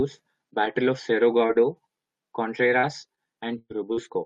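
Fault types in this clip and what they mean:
Repeated packet loss (robotic sound): from about 0.65 to 4.07 s the speech keeps dropping out in seven short gaps, the longest about 112 ms. Each hole gets patched by stretching the last bit of sound, roughly 0.3 s in all, so it comes across choppy and robotic.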